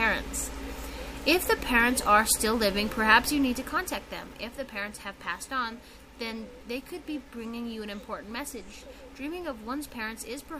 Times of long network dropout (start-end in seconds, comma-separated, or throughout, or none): none